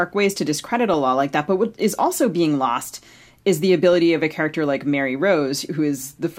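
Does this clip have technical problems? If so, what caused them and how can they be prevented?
Yes. DAB burbling occurs at 0.94 s, between "ways to discredit a" and "law like that but", and at 3.93 s, after "being lost is the". Weak reception let a small fraction of bit errors slip past error correction into the MP2 data, so corrupted samples put short blips of noise into single sub-bands. Each event is brief. On a spectrogram it shows as isolated bright rectangular blocks confined to narrow frequency bands, and the waveform shows only an irregular blip. Better antenna placement or a stronger signal would keep the error rate within what error correction can repair.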